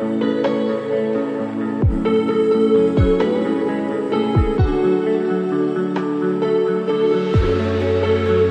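No technical faults can be heard anywhere in the recording.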